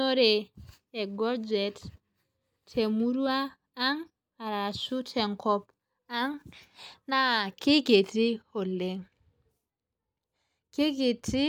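No technical faults are audible.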